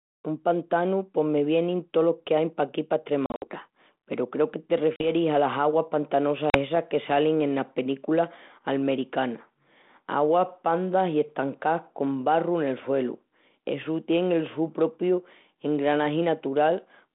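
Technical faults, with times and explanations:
3.26 to 6.58 s, packet loss on an ADPCM call: three gaps, at 3.26 to 3.44 s (about 120 ms missing, scattered over 160 ms, longest hole 60 ms), 4.96 to 5.07 s and 6.50 to 6.58 s (about 40 ms each). Each hole cuts in and out abruptly as silence. Because the decoder's adaptive predictor and step size drift from the sender's during the gap, the 200 Hz to 3.6 kHz, 32 kbit/s G.726 sound resumes with brief distortion.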